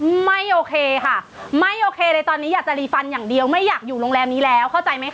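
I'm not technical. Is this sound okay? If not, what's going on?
No. Throughout the recording, the loud and soft parts sit oddly close together, so the speech sounds squashed. This is gain pumping. The likely cause is that the microphone level was set far too high, so an automatic limiter keeps pulling it down on every loud sound. The room's own background noise is also there, which is normal.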